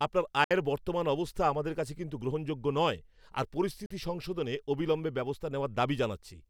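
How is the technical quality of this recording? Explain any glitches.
The recording has two short gaps where the speech cuts out. A Bluetooth dropout occurs at 0.44 to 0.51 s (about 64 ms) and again at 3.86 to 3.91 s (about 43 ms). The speech drops to silence and resumes further along, as though it kept playing. The likely cause is audio packets arriving too late at the headphones and being discarded, with gap lengths fitting roughly three and two lost packets.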